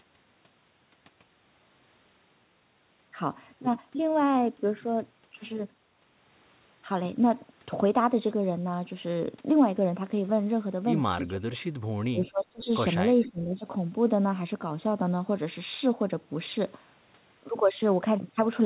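Between 11.31 and 11.65 s, again from 12.11 to 12.7 s, and once more from 13.26 to 13.65 s, the speech sinks, by as much as about 25 dB in the first two dips and roughly 15 dB in the third. The likely cause is speech suppressed in double talk: with both ends talking, the echo canceller mistook this talker for returning echo and attenuated it. On a waveform the envelope collapses into short troughs; a spectrogram shows thinned, faded bands.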